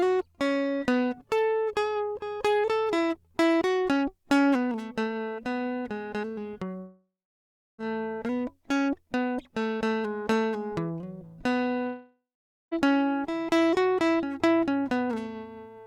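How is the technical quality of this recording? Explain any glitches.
The music breaks off twice. Long network dropout at 6.77–7.80 s and 11.86–12.73 s: audio likely stopped arriving, so the last sound smears into a fading buzz, then silence, and the music resumes further on with about 1.0 s and 0.9 s missing.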